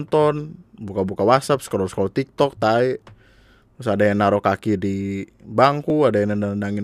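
At 0.38, 3.02 and 5.9 s the speech jumps ahead about 20 ms with no silent gap, likely a dropped buffer (overrun) rather than a dropout.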